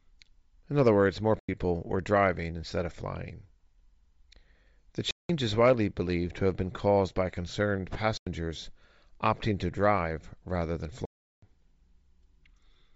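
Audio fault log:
Throughout: Bluetooth LC3 compression. The speech carries a breathy, grainy edge in its upper range where high bands have been emptied and refilled with noise. The damage is plainly audible and likely comes from LC3 coding at a low rate, consistent with about 32 kbps and 7.5 ms frames.
1.39 s, 5.11 s, 8.17 s, 11.05 s: block of digital silence. The speech drops abruptly to silence for 93 ms, 186 ms, 93 ms and 372 ms. The lengths fit whole multiples of a 4096-sample buffer, pointing to output buffers not filled in time.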